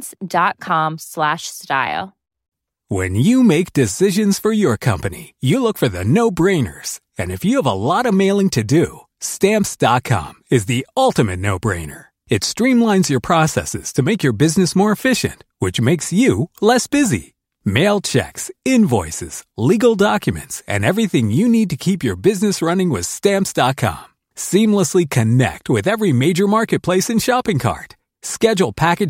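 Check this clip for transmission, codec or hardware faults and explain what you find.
No faults were found.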